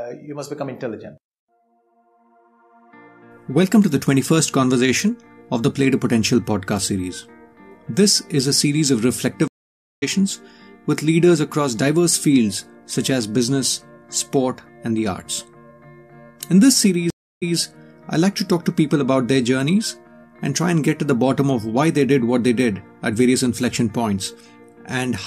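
At 9.48 s a stream reconnect drops the audio for 544 ms. The restarted decoder resumes roughly 0.4 s further on, so a stretch is skipped. A second reconnect at 17.10 s brings 314 ms of silence, then resumes 139 ms earlier, briefly repeating material.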